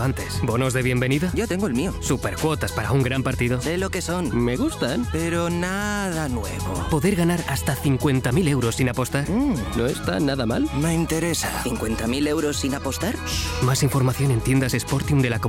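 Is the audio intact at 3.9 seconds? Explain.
Yes, at 3.9 seconds the audio plays through cleanly, with no dropout, click, distortion or other break in the signal.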